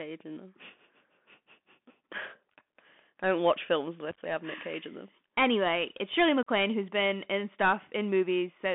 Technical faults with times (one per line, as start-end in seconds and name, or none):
0.00-8.75 Bluetooth CVSD headset codec
4.11-4.19 unconcealed Bluetooth headset packet loss
6.43-6.49 unconcealed Bluetooth headset packet loss